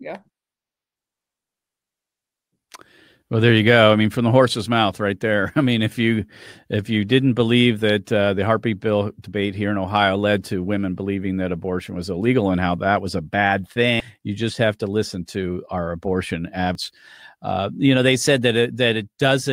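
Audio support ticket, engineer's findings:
Damaged data in a compressed stream: brief glitch at 14.00 s, between "that was a bad" and "you just have to", and a longer one at 16.75–16.78 s after "listen to our abortion". Decoder misreads corrupted frame bytes and loses sync until the next frame header. A packet dropout would leave a gap, not a burst.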